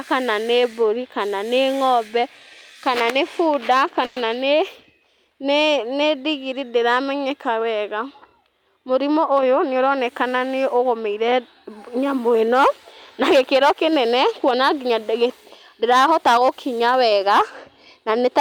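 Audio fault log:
4.05–4.29 s, call audio freeze: speech stalls into a fading buzz for about 110 ms, then resumes where it stopped, likely from delayed packets draining the jitter buffer.
8.95–10.70 s, jitter buffer speed-up: speech runs about 6% fast at unchanged pitch as repeated pitch-period cuts remove roughly a tenth of a second, sounding hurried.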